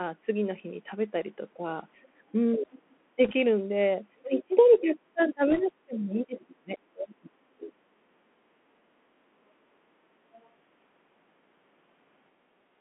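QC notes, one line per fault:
Throughout: Bluetooth CVSD headset codec. The band runs only from 200 Hz to 3.4 kHz, and the sound has the grainy, rough quality of a one-bit delta stream, which fits a 64 kbit/s CVSD link. Sibilants turn scratchy and loud bright moments distort where the adaptive step cannot keep up. On a spectrogram, nothing lies above 3.4 kHz and a granular noise floor fills the band, thickening around the sharp onsets.
1.57–1.64 s and 4.22–8.08 s: speech suppressed in double talk. The first dip is brief, about 70 ms and about 10 dB down. The second stretch is long: across roughly 3 s the speech repeatedly sinks, thins and drops out in pieces, by up to about 30 dB. The likely cause is the echo canceller mistaking both sides talking at once for echo and turning everything down. The waveform envelope shows ragged notches, and the spectrogram loses its upper band first.
2.05–2.16 s: background gated by the echo canceller. 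The room sound drops by about 12 dB for about 100 ms, then returns. The canceller clamped the microphone while the loudspeaker was active and released it afterwards. The waveform shows a short, flat-bottomed trough in the noise floor. On a spectrogram, the background wash fades out across the whole band and comes back at once, with hard edges.
2.71–2.96 s, 4.37–4.43 s and 10.36–10.47 s: other side's voice leaking through. A faint second voice sits under the main sound, at about 25 dB, about 15 dB and about 30 dB below it respectively. The 4.37 s scrap is the most noticeable. Residual loudspeaker pickup that the canceller failed to subtract is the likely source. On a spectrogram, weak harmonic traces appear that don't line up with the main talker's pitch track.
3.25–3.32 s and 5.51–5.61 s: bit errors on a Bluetooth voice link. These are bursts of rushing, crackly noise without sharp clicks, stronger in the second burst, where the error rate is about 1.5% against about 1% in the first. 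Each flipped bit nudges the delta output only slightly and the error decays, so the damage spreads as noise rather than spikes. The spectrogram shows a broadband haze over the band, and the waveform looks fuzzy, not spiky.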